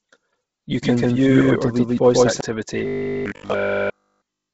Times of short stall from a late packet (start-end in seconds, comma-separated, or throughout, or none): none